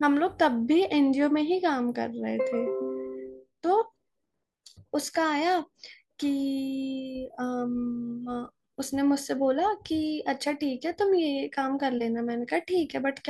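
No technical faults can be heard anywhere here.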